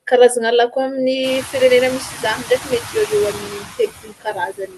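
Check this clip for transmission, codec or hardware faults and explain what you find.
Two noise suppressor faults are audible; the room noise that swells around 1 s and the Opus call path (about 32 kbps, top at 12 kHz) aren't faults.

Noise suppressor artifacts run throughout: steady noise is pulled down by about 19 dB between phrases, leaving residue, seen as patchy, flickering speckles in spectrogram gaps.

Speech cut by the noise suppressor appears from 3.5 s to the end: quiet speech is mistaken for noise and dropped by up to about 21 dB, sounding swallowed, with a visibly shrunken waveform.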